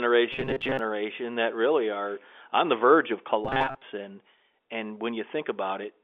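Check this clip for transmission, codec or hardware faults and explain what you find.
There's one fault here, showing up twice, heard through a telephone-band line that itself sounds clean. From 0.33 to 0.79 s, just before "that really are on", and again from 3.45 to 3.82 s, right after "on the verge of", the speech turns into a rigid, metallic buzz locked at 133 Hz. That's robotic sound from repeated short buffers, likely caused by audio arriving late while the same roughly 7.5 ms chunk is replayed. About half of the first stretch and most of the second is filler rather than real audio.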